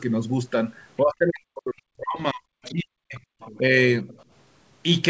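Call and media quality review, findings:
Speech suppressed in double talk, 1.01–3.20 s. Talker level collapses, deepest about 40 dB down, roughly two seconds lost. Likely echo canceller under double talk, attenuating near-end along with echo. Second dip at 3.58–3.74 s, shallow, about 5 dB. Same likely cause, brief clamp after far-end activity.

Other side's voice leaking through, 2.63–2.73 s and 3.40–3.58 s. Faint second voice, about 25 dB under the talker. Likely residual loudspeaker echo the canceller did not fully remove. Again at 4.08–4.24 s, about 30 dB under. Likely the same incomplete cancellation. Short scraps each time, band-limited like the rest of the call audio, nothing above 8 kHz.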